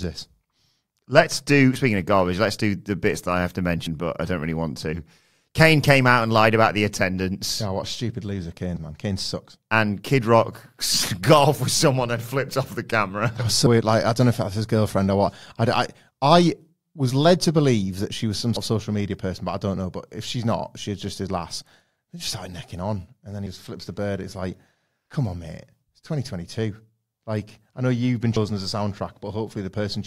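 At 3.86 s the speech jumps abruptly, roughly a tenth of a second gone without any gap: likely audio missing between chunks, lost at a 5-second chunk boundary.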